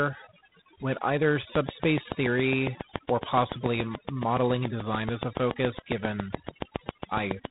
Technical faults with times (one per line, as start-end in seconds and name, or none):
0.00-7.50 overdone noise removal
0.00-7.50 G.726 ADPCM
1.55-7.46 train of clicks